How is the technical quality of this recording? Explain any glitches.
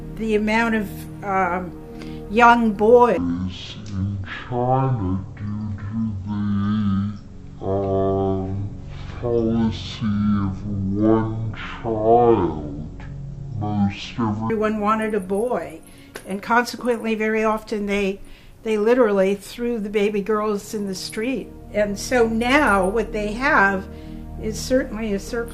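The recording has one clear glitch, lasting about eleven seconds.

From 3.17 to 14.50 s, stereo is read as mono. Left and right samples are taken in turn as one channel. The sound plays at half speed and drops 12 semitones, a full octave. A faint mirrored copy appears high in the spectrum.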